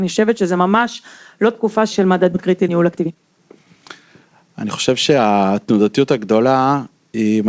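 At 2.34 s there's a skip ahead: about a second of audio gets dropped while later audio was already queued, and playback just jumps straight across with no fill, so the two sides butt together almost directly. Right after, from 2.37 to 3.84 s, the jitter buffer speed-up kicks in hard at 123% speed, trimming roughly a third of a second in tiny pitch-period chunks. The speech sounds rushed but keeps its pitch. A milder pass follows from 4.26 to 5.26 s at 107%, shaving off a few tens of milliseconds, all over a G.722 call path with nothing above 8 kHz.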